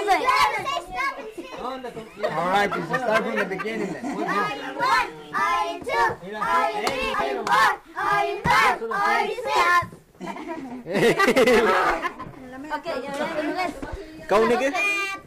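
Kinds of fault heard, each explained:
Crude rate conversion: the sample rate was changed from 48 kHz to 44.1 kHz by picking nearest samples without filtering, leaving an inharmonic gritty fizz roughly 25 dB below the sound throughout.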